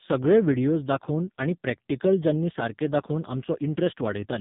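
From start to finish the speech carries the marks of the AMR narrowband mobile codec, heavily damaged. The signal was squeezed through an 8 kHz phone path that models the vocal tract and rebuilds it from a few pulses in each short frame, so the voice sounds buzzy, thin and synthetic. The degree of damage fits one of AMR-NB's lowest modes, around 5 kbps. On a spectrogram all energy stops abruptly at 3.8 kHz, with empty black above, and the harmonics look coarse and smeared.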